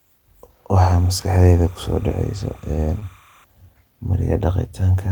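Speech recording with two faults. Linear timecode running at 30 frames per second leaks in from a neighbouring track or cable, an instance of timecode bleed. From 0.76 to 3.44 s it adds a steady chirping warble near 1 and 2 kHz, roughly 30 dB below the speech. Between 2.99 and 3.03 s, about 20 ms of audio failed to reach the decoder, a case of short concealed packet loss. The receiver extended the preceding sound across the gap, leaving a brief smear before the speech blends back in.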